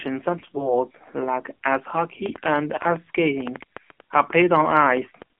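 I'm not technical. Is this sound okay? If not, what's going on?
No, it isn't quite right. The whole clip has gone through the AMR narrowband mobile codec, the squeezed format old phone networks used. It keeps only a narrow slice of the voice, so the speech sounds thin and boxy, with a plainly buzzy, synthetic edge.

There's also a short patch of AMR bit errors from about 0.38 to 0.74 s, just before "like ice". Some of the data got scrambled in transit, so the voice keeps its pitch and loudness but turns hoarse, scratchy and gargly for that moment.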